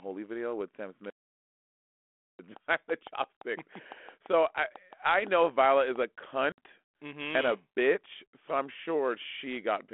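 Speech carried over a 32 kbit/s G.726 ADPCM telephone link, band-limited to roughly 250 Hz to 3.4 kHz with light codec roughness, has two faults. An audio dropout to silence, most likely from a lost input or a disconnected device, cuts the sound from 1.10 to 2.39 s. About 1.29 s is replaced by silence with no room tone, so speech stops abruptly and resumes mid-flow. Later, packet loss on the ADPCM call removes several packets, a 60 ms hole from 6.52 to 6.60 s. The decoder's adaptive predictor and step size then no longer match the sender's, so speech returns after the sharp-edged gap with some distortion.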